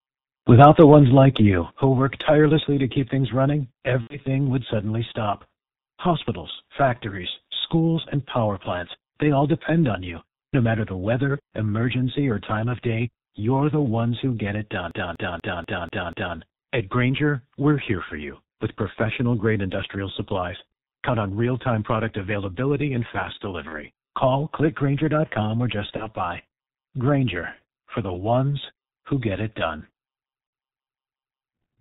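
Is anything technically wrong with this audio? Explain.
Yes. Throughout, the speech sounds muffled and hoarse, with smeared consonants and nothing above 4 kHz. That points to the G.723.1 codec at a very low rate, roughly 6 kbit/s. Its 30 ms frames and slowly updated voice model blur fast detail, and the damage here is heavy.

At 1.62 s the voice and the background drop together by about 5 dB in a single step and stay lower. The likely cause is a microphone volume stepped down, where call software abruptly cut the device's input gain.

At 4.01, 7.67, 23.68 (after "product availability and fast"), 25.97 (after "or just") and 30.47 s, the sound turns briefly into a fading buzzy tone or coloured noise, then stays weak for a moment. This is VoIP packet loss concealed by the speech codec. The decoder extrapolates from its last pitch and filter while lowering the gain. The longest gap, at 4.01 s, fits about three missing 30 ms frames.

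From 14.91 to 16.37 s, just after "ones who get it", a fragment of about 0.24 s repeats six times, with a short mute at each jump. It is the even stutter of a CD stuck on one turn, as if a scratch keeps throwing the laser back one track.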